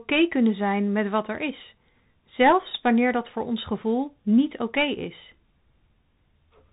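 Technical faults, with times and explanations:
Throughout, Bluetooth CVSD headset codec: the speech is cut off above about 3.8 kHz, sounding boxed-in, with a grainy hiss and scratchy s sounds. That fits one-bit up/down coding at 64 kbps, where a step that can't keep up smears sharp, loud detail.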